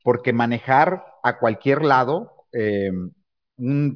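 No faults turn up anywhere in the recording: no dropouts, no discontinuities, no level or timing problems.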